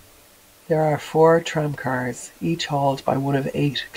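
Low bit depth with dither runs through the whole clip: the speech sits over a constant, even hiss about 30 dB below it, which fits an 8-bit signal dithered before rounding. The dither turns the coarse rounding error into steady white noise instead of audible distortion.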